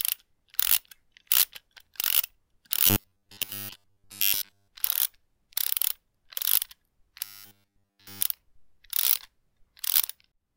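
Everyday sounds turn into a robotic sound from repeated short buffers, a rigid 100 Hz buzz, from 2.87 to 4.68 s and 7.24 to 8.22 s. It likely comes from a 10 ms chunk looping.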